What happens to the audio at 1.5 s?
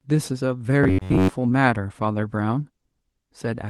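At 1.5 s the audio is inside a stretch of repeated timing corrections running from 0.16 to 3.57 s. The receiver keeps repeating short pieces to stay in step. The sound plays at about 97% speed. Roughly a tenth of a second is added in total. At most it comes across as slight hiccups or an unsteady tempo.

The cause is clock drift between sender and receiver, present throughout. The sender's clock runs about 3% slow. The jitter buffer keeps draining, which forces those repeats. Small timing hiccups recur at uneven intervals around this moment.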